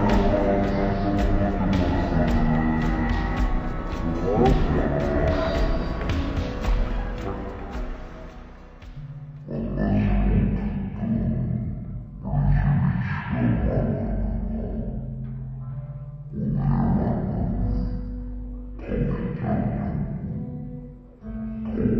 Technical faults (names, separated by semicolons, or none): stereo read as mono